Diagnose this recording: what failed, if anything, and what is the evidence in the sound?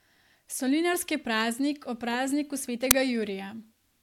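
The failure is at the driver or buffer stage: an uninitialised buffer reached playback. At 2.91 s the speech is interrupted by a single loud crack lasting about 5.8 ms, abrupt at both edges and unrelated to the surrounding signal. That length fits one 256-sample block. The mechanism is a block handed to the output before any audio was written into it, so whatever stale memory it held was read out and played as samples.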